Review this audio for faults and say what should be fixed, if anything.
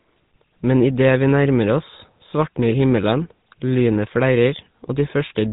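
The whole clip carries GSM full-rate codec damage, plainly audible from start to finish. The codec models the vocal tract as a filter and excites it with a regular pulse train that retains only every third sample of the residual. This leaves a buzzy, gravelly texture on the speech. Nothing is present above about 3.8 kHz, and the sound fits the 13 kbps full-rate mode. To prevent it, capture or transfer the speech over a wideband path rather than a GSM-coded link.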